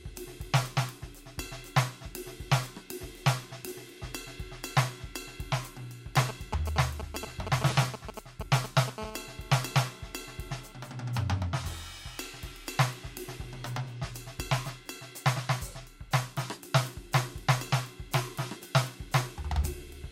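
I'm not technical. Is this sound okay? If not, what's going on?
No. From about 6.2 to 8.9 seconds the music is interrupted by a galloping dit-dit-dit of short buzzes. These are GSM signalling bursts: an older 2G mobile phone nearby is checking in with the network, and the audio equipment picks up its radio pulses as sound.

Right after, from about 9.0 to 10.7 seconds, a steady, harsh, raspy buzz sits under the music at about 217 times a second. This is GSM phone buzz, heard when that phone is on a call and transmitting constantly. It is quieter than the earlier bursts.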